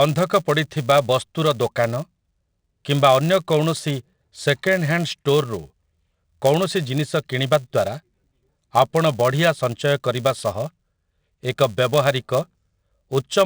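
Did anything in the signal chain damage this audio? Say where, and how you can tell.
Yes. A filter restarted on every block damages this speech throughout, in the block-processing stage. A steady 200 Hz buzz rides under the sound and tracks its level. The filter starts each block from silence, so every 5 ms block begins with a small transient.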